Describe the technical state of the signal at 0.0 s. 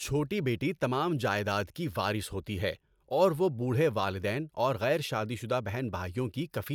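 The audio is intact at 0.0 s, with no fault present at that moment.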